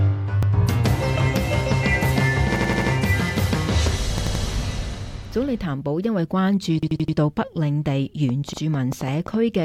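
Short stutters break the sound at 0.43 s, 2.56 s, 4.18 s and 6.83 s. Each is a piece of about 85 ms looping with a hard join, heard twice at 0.43 s, five times at 2.56 s, four times at 4.18 s, and five times at 6.83 s. This is a repeated buffer: new audio did not arrive in time, so the device replayed its last block, which fits a 4096-sample buffer.

From 8.29 s to the end, a train of clicks ticks over the sound at about five per second, unevenly spaced and peaking roughly 10 dB above the signal. The likely cause is interference from nearby equipment or a faulty connection or power supply. Within it, at 8.53 s, another 85 ms piece plays twice in a further repeated buffer.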